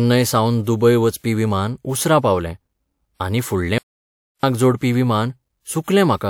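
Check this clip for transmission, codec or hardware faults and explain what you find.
Two faults can be heard: an audio dropout to silence and a pre-echo.

From 3.78 s to 4.43 s the speech cuts off mid-flow and about 0.65 s is missing. This is an audio dropout to silence, likely from a momentary loss of the input while recording carried on, so the gap holds dead silence with no room tone. That empty gap separates it from a quiet pause or a gated passage, which would keep some background, and from a glitch that repeats or smears sound.

At 5.83 s to 5.88 s, a sharp onset is preceded by about 42 ms of hiss, which is pre-echo. A transform codec spread quantisation noise across the whole block holding that attack, so noise sized for the loud onset leaked into the quiet moment before it, softening the attack. The hiss comes before the sound rather than trailing after it, which sets it apart from reverberation or ordinary echo.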